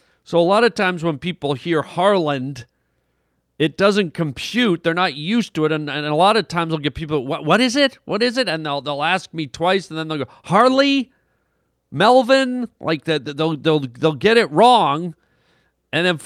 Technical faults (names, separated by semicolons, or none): none